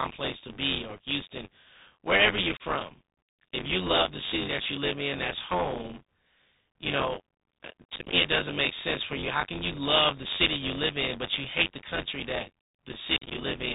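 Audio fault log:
Throughout, buffer tearing: writer and reader cross inside each period, splicing in roughly 20 ms-old audio, giving a rattling buzz near 93.8 Hz, consistent with a 512-sample buffer.
Throughout, Bluetooth CVSD headset codec: one-bit adaptive-step coding cuts everything above 4 kHz, roughens s sounds, distorts loud high content and leaves granular hiss under the speech.
2.57–2.62 s, 7.96–8.14 s and 13.17–13.33 s, unconcealed Bluetooth headset packet loss: hard-edged holes of about 30 ms, then scattered dropouts totalling 93.8 ms and 101.2 ms, sounding chopped.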